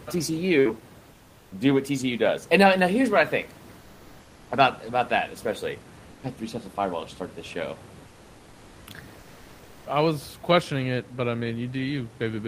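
A speech recording where, in the pauses at 1.15–1.51 s, 3.79–4.47 s, 6.11–6.23 s, 8.07–8.87 s and 9.19–9.83 s, the room background turns flat, featureless and about 2–4 dB quieter. This is comfort noise in place of the background, likely from Opus discontinuous transmission filling the silences with synthetic noise.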